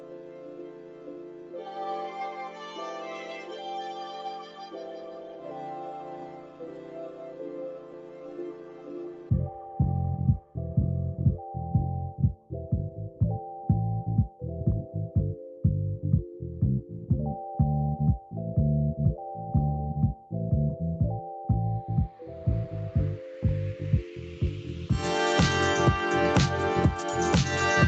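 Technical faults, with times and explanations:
Throughout: noise suppressor applied to music or sounds. A suppressor built for speech treats sustained tones, ambience and reverb as unwanted noise and keeps pulling them down. The level swings by around 10 dB, so onsets pass while held sound and tails sink and pump.
0.00–1.67 s, 3.20–3.66 s, 4.43–5.59 s, 5.80–9.30 s, 12.90–13.21 s and 15.41–15.64 s: sound cut by the noise suppressor. In these spans it mistook steady or fading sound for noise and attenuated it further, by about 6 to 8 dB, cutting decays short. The longest dip, 5.80–9.30 s, sags for roughly three seconds.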